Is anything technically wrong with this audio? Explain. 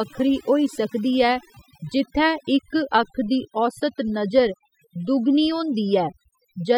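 Yes. Overdone noise removal runs throughout the speech. Bands near the estimated noise are cut away, leaving near-silent gaps with twinkling specks.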